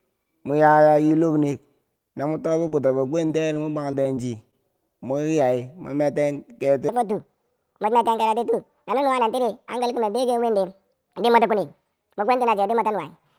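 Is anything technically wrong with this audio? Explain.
Yes, there are two problems.

From 2.67 to 4.54 s, just before "moki yai", there is repeated packet loss with a robotic sound. Audio repeatedly failed to arrive in time, and each hole was patched by extending the preceding sound. The patches total about 210 ms and cover roughly 11% of the stretch, with about 180 ms simply missing. The longest gap is 39 ms. Unlike a single dropout, the holes come in quick succession, giving a choppy texture rather than one clean silence.

From 6.89 s to the end, a section plays at the wrong speed: 1.54 times too fast. This is likely caused by playback or editing against the wrong clock. Because speed and pitch rise together, the speech sounds hurried and about seven semitones higher. A pure pitch shift would raise the pitch without changing the pace, but here the timing is compressed as well, and the change begins abruptly rather than drifting.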